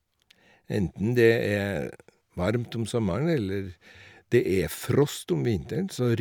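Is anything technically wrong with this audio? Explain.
No, nothing technically wrong can be heard in this speech recording. There is no fault to point to at any moment in the clip.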